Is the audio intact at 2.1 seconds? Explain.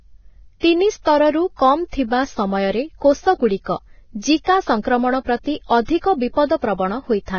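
No. At 2.1 s the speech, like the whole clip, carries heavy Vorbis compression damage, likely from a very low bitrate of around 18 kbps. Nothing survives above 6.6 kHz, and the coarsely quantised treble turns to grainy hiss that roughens tones and smears attacks.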